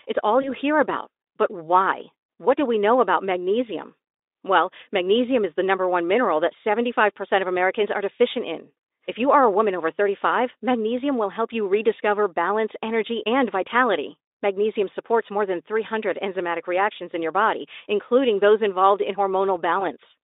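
VoIP packet loss concealed by the speech codec occurs at 0.41 to 0.55 s, just before "hear about", and at 19.79 to 19.83 s. Each time one 20 ms packet goes missing, and the Speex decoder rebuilds it from its last pitch and filter, leaving a brief smeared stretch that fades.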